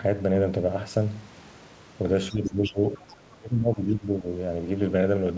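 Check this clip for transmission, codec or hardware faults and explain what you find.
Two echo-control faults cluster between 2.3 and 4.3 s of this speech clip, with the talker's voice and a second, fainter voice overlapping.

Speech suppressed in double talk, 2.29 to 2.81 s and 2.98 to 4.26 s. When both ends talk at once, the echo canceller likely cannot separate local speech from loudspeaker echo and pulls everything down. The talker dips by roughly 15 dB, then by about 25 dB for around a second.

Other side's voice leaking through, 2.45 to 2.73 s and 2.95 to 3.15 s. The far-end voice playing on the talker's loudspeaker was likely not fully removed from the microphone signal. It sits about 15 dB under the speech at first, then fades to a faint trace about 30 dB down.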